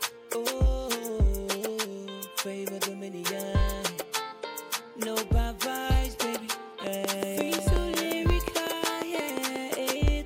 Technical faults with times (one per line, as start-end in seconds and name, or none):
6.87-10.09 train of clicks